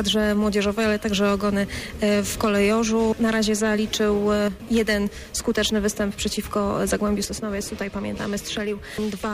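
The audio drops abruptly in level by about 6 dB twice: briefly from 4.48 to 4.60 s, then from 7.25 s to the end. The likely cause is one channel dropping out, so the mono sum keeps only half of the shared signal. Unlike a fade or gain dip, each drop is instant and holds flat, and the step matches the 6 dB that losing one of two equal channels gives.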